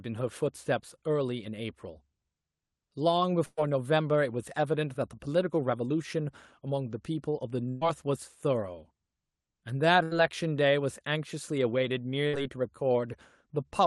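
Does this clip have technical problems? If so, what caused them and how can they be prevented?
Yes. Burst of packet loss occurs four times: 3.45 to 3.59 s, 7.69 to 7.83 s, 10.03 to 10.13 s, and 12.27 to 12.35 s. Runs of packets arrived too late or not at all, so the receiver stretched the last sound and faded it, dropping about 120, 120, 80 and 60 ms of speech. The first gap even falls to silence for about 30 ms. To prevent this, use a more stable network path or enable forward error correction and a deeper jitter buffer.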